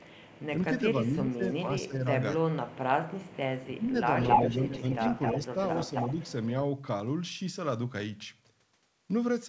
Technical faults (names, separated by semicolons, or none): echo leak; speech suppressed in double talk